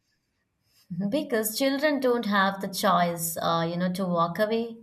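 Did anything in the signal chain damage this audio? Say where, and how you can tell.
No, nothing in the signal chain damaged this speech recording. No stage between capture and playback leaves any audible mark.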